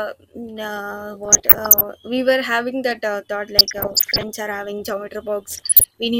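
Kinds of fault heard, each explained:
DAB burbling: Weak reception lets bit errors corrupt the audio data, so single sub-bands jump in level. Three bursts break over the speech.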